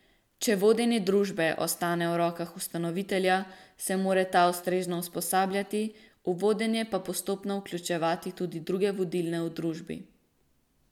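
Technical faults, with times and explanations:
No technical faults are audible in this speech recording.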